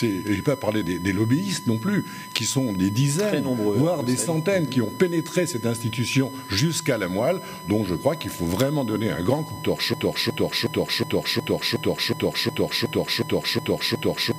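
A steady USB whine runs through the whole clip. It is a fixed tone at 1 kHz, sitting roughly 15 dB below the sound. Current drawn by the USB bus in 1 ms frames has leaked into the audio through the power or ground.

From 9.94 s to the end, a broken-record loop takes over. A 365 ms fragment repeats exactly, back to back, about a dozen times. The stream likely stalled and kept resending its last piece, so the audio that belonged there is lost.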